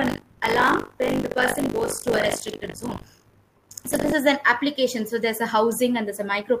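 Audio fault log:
0.00–4.13 s, buffer tearing: the software filling the ring buffer and the hardware draining it have drifted out of step, so their positions cross inside every period. About a fifth of each buffer still holds audio from roughly 70 ms earlier, with a hard join at each edge. That splice repeats at 50 Hz, which points to a 20 ms period, and is heard as a steady robotic buzz riding on the sound until the tearing stops.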